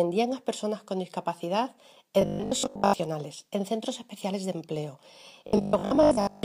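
Audio likely arrived too seldom, so playback kept repeating its last 20 ms buffer, skipping most of the real sound. From 2.22 to 3.00 s and again from 5.47 to 6.43 s this robotic sound from repeated short buffers imposes a rigid, metallic 50 Hz buzz.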